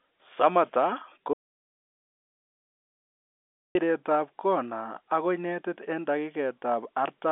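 At 1.33 s the speech stops dead in an audio dropout to silence. Silence runs until 3.75 s, about 2.4 s, with no room tone. The input was likely lost while recording continued. The telephone-band sound returns abruptly.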